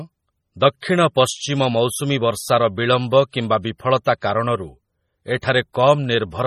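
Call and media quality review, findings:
Whole clip: watery, swirly speech with metallic sibilants and nothing above 14.8 kHz; likely heavy MP3 compression at a low bitrate near 32 kbps. Unlike band-limiting alone, weak spectral lines flicker frame to frame.

Pre-echo: brief hiss just ahead of attacks at 0.81–0.83 s, 3.31–3.33 s after "ମୌସୁମୀ ବର୍ଷାର ବିଳମ୍ବ", 4.2 s and 5.41–5.43 s. The codec's block noise spreads back into the quiet just before them, so the attacks go soft rather than clicking.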